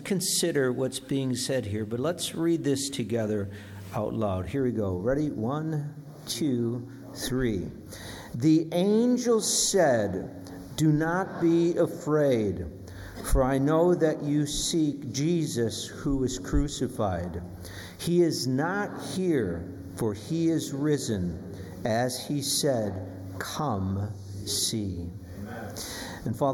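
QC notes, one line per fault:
4.56 s to end, channel delay (comb filtering): one channel arrives roughly a fifth of a millisecond late and the two are summed to mono, so content common to both cancels at evenly spaced frequencies, the first around 3 kHz and the next roughly three times higher, giving a hollow, phasey top end. Unlike flanging, the notches stay fixed rather than sweeping. Unlike plain low-pass dulling, energy returns between the notches.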